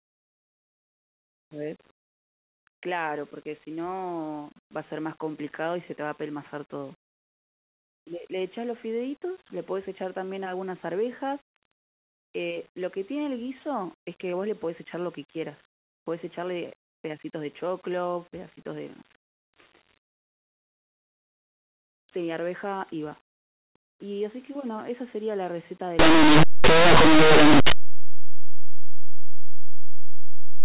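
Speech. From 25.99 s to the end at 30.65 s, linear audio is read as companded. Plain linear 8-bit samples are decoded as mu-law codes. Small values just past zero become huge outputs. The result is harsh, very loud distortion.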